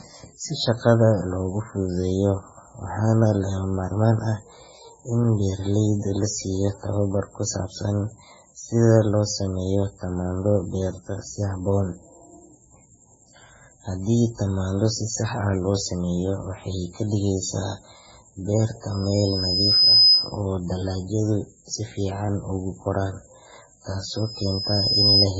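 Speech that sounds watery and swirly throughout, with a hard spectral ceiling at 7.6 kHz and flickering holes on a spectrogram, likely from heavy MP3 compression at a very low bitrate, around 16 kbps. A loudspeaker feedback squeal at 5 kHz swells over about a second to roughly 10 dB above the speech, from 18.91 to 20.37 s and again from 24.07 to 25.27 s. Each appears as a bright horizontal line at 5 kHz and a growing waveform envelope.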